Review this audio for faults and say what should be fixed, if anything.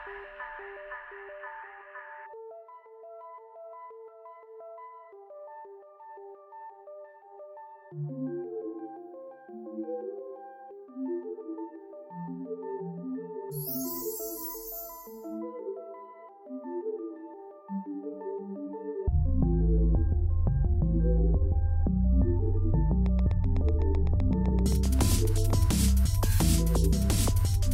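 A train of clicks runs from 23.06 to 25.51 s. They come at a regular 7.8 per second, about twenty in all. They peak about 5 dB above the sound. Similar pulses at a steady rate likely come from outside interference. Fix it by shielding cables and moving away from nearby equipment.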